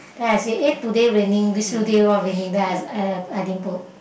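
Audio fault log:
0.29–1.19 s and 1.94–2.12 s, hard clipping: peaks driven about 5 dB, then about 3 dB, past full scale are sliced flat, giving abrupt crackly fuzz, not soft saturation's rounded warmth.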